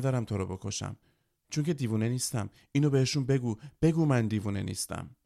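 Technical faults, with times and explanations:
Nothing technical stands out in this speech recording; there's nothing to flag at any point.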